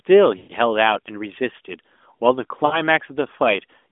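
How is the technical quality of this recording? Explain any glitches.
The recording is narrowband phone speech with two dropouts from lost AMR speech frames. At 0.38 to 0.52 s and again at 2.66 to 2.83 s, the speech smears into a drawn-out, fading sound before returning briefly weak. Radio errors corrupted about 120 ms and then 60 ms of frames, so the decoder repeated the last good pitch and vocal-tract settings at falling gain. The band stops near 3.5 kHz, which fits AMR-NB at around 12.2 kbps.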